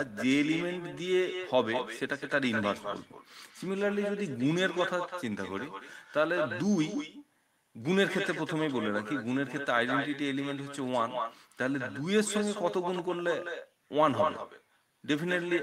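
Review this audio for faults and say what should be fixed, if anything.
There's echo with no canceller running through the whole clip. Every phrase is trailed, around a fifth of a second later, by a copy that's only about 8 dB down, thinner than the original. That's the far end playing the call out of a loudspeaker, its mic catching it, and nothing stripping it out before it comes back across the network. To prevent it, get acoustic echo cancellation switched on at the far end, or have them wear headphones.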